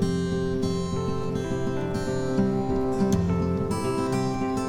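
Nothing is technically wrong with the audio in this clip.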